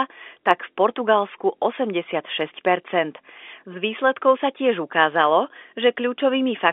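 Listening to this telephone-band speech, carried over G.711 A-law with its narrow line band of about 300 Hz to 3.6 kHz, nothing stood out as a technical problem.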